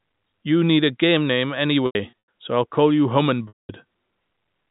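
Between 1.86 and 2.28 s the sound stutters into held, buzzy fragments that fade to silence and return. At 3.48–3.69 s a single 210 ms gap does the same. This is packet loss with pitch repetition: the receiver looped the last pitch period, faded it within about 50 ms, then cross-faded back.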